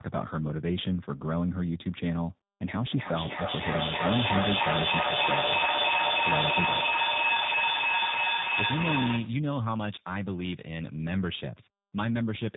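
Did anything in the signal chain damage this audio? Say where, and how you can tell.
Yes. Throughout, the speech sounds rough, muffled and warbly, with nothing above 3.8 kHz. That is tandem speech coding at the codec stage: the call passed through CVSD, G.711 mu-law, then G.729A at 8 kbit/s, each decoding and re-encoding the previous coder's already degraded output.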